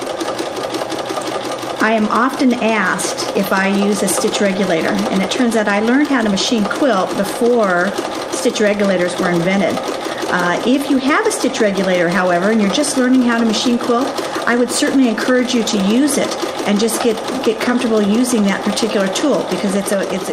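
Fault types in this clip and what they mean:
No fault types can be heard in this clip, so there is nothing to explain.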